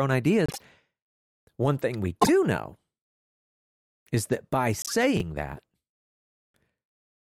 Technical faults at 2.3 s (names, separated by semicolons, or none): frames out of order